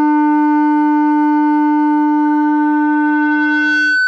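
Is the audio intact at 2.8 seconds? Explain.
No. At 2.8 seconds you're inside a loudspeaker feedback squeal that starts at 2.24 s and runs to the end at 4.07 s. The mic is hearing its own speaker, so a 1.5 kHz tone swells over about a second and a half until it's roughly as loud as the sounds themselves.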